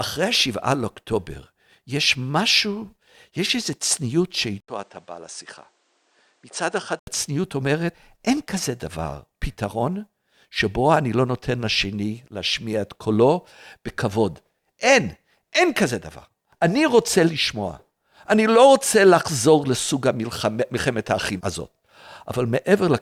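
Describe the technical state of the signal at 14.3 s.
At 14.3 s the speech signal is intact, with no audible fault at that point.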